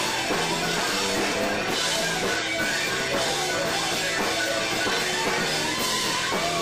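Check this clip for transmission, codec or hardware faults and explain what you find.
Two faults are audible: a steady buzz throughout and one brief jump in the audio.

From start to finish, a regular buzz at 200 Hz rides on the sound, growing louder in louder passages and fading in quiet ones. This is a filter restarted on every block: the filter discards its memory at each block boundary and begins again from silence, leaving a small transient each time. Ticks arriving 200 times per second point to blocks about 5 ms long.

Between 2.37 and 2.43 s the audio lurches forward. These are compressed frames skipped: around four frames, each 46.4 ms, were never played, either missing from the stream or rejected by the decoder as damaged. Roughly a fifth of a second of material vanishes.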